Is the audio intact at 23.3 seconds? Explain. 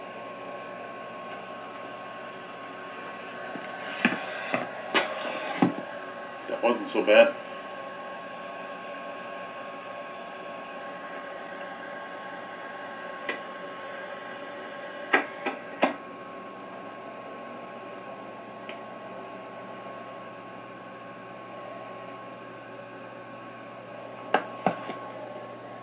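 Yes, the audio at 23.3 seconds is intact, with no dropout, glitch or other fault; the narrow telephone-style bandwidth heard there, with nothing above 4 kHz, is the normal sound of the call path.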